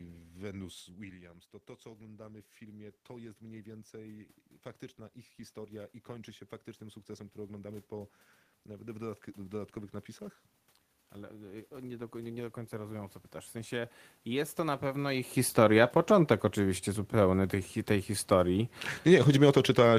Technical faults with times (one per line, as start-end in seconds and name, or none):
1.82-4.39 automatic gain rising
5.53-10.04 automatic gain rising
11.14-15.24 automatic gain rising